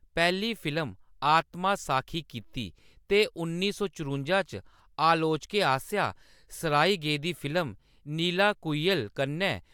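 Nothing stood out as a technical fault on listening to this recording of speech.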